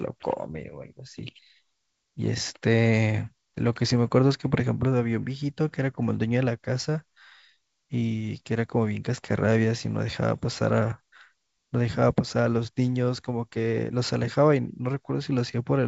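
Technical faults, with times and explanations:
No technical faults can be heard in this speech recording. It passes through G.722 wideband telephone coding at 64 kbit/s, which keeps the speech clear up to about 7 kHz, with at most a faint trace of hiss in the upper band.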